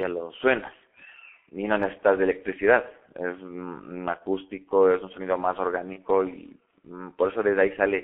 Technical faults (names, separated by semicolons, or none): G.723.1 codec; VoIP packet loss concealed by the speech codec